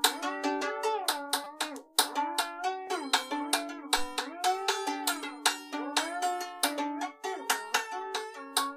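At 1.44 to 1.46 s and again at 2.87 s the music catches in a repeated buffer: a 5 ms slice replays four times, then once, heard as a brief buzz and then a click. Nothing goes missing, which separates it from a dropout.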